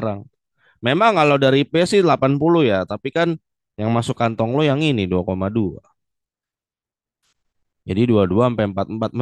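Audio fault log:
No faults heard.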